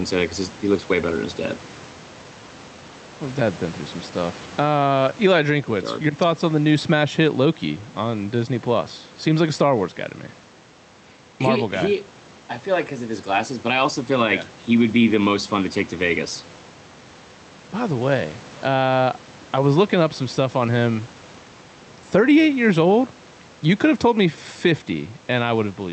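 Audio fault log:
throughout: gain pumping. The background noise sits about 30 dB below the speech. The level swings by roughly 10 dB. The likely cause is gain set too high, with a fast limiter pulling it down.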